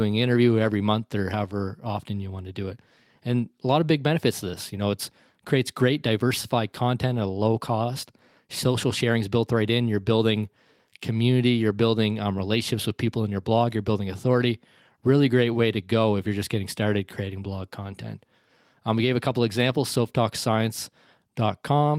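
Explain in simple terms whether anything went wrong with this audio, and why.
Nothing went wrong here that a listener would catch; the speech just carries on steadily, and no moment in it sounds like a technical slip.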